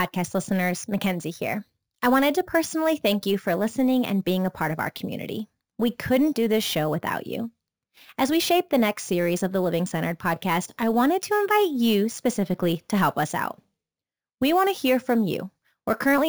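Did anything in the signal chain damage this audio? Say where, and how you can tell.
Yes. Imaging from sample-and-hold upsampling runs throughout the speech, introduced at the sample-rate conversion stage. A metallic fizz between 8 and 16 kHz, about 20 dB below the signal, tracks the speech level, which fits a 16 kHz source raised to 44.1 kHz by repeating samples without an anti-imaging filter.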